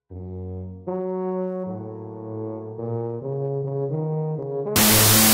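From 4.76 s to the end at 5.34 s, a wrong sample width fault turns the audio into loud, harsh noise with the original faintly buried underneath, playing at half speed and an octave low. This fits 32-bit float data being read as 16-bit integers, each sample split into two mismatched values.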